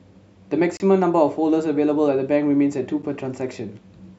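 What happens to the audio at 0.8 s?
At 0.8 s the speech drops out in a block of digital silence. From 0.77 to 0.80 s, about 30 ms of the sound is simply silent. The signal snaps to nothing and back with no fade, leaving a short hole in the sound. A gap like this points to the output buffer not being filled in time, or to a calculation producing invalid values that were zeroed.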